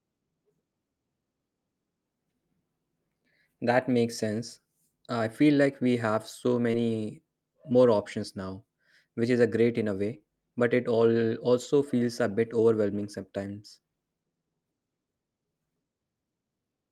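Speech with two kinds of packet-loss damage. Short concealed packet loss at 6.71 s and 10.17 s: about 20 ms of missing audio is filled by extending the preceding sound, heard as a brief smear or wobble. Lost packets rebuilt from error correction at 6.73, 7.71, 10.13 and 11.63 s (20 ms each) and from 12.95 to 13.05 s (60 ms): there is no gap or stretched sound, only momentary roughness and added noise from the low-bitrate backup copies.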